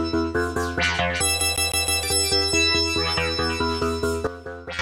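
From 1.41 s to 2.03 s the audio shows the CD stuck on one turn: the same 0.16 s segment plays four times in a row, each repeat separated by a brief mute where the pickup jumps back. A surface scratch is returning the laser to the same track position on every rotation, so playback cannot advance. The result is the rapid, evenly spaced stutter typical of a skipping disc, repeating at roughly six times per second.

At 4.27 s there is a sudden gain jump: the level drops by about 12 dB from one sample to the next and stays down until 4.79 s. The sound and its background noise fall together, with no fade or ramp between the two levels. This behaviour points to a likely cause of a digital gain setting or bit shift applied instantly rather than smoothed over time, producing an abrupt step in loudness instead of a gradual change.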